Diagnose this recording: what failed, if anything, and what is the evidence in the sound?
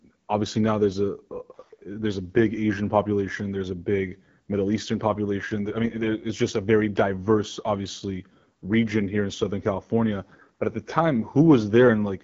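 The fault lies at the codec stage, throughout: the AMR wideband (HD Voice) codec at a low rate, which points to around 8.85 kbit/s. The speech is plainly rough and raspy because its pulse-driven vocal tract model runs short of bits. On a spectrogram, nothing appears above 7.5 kHz.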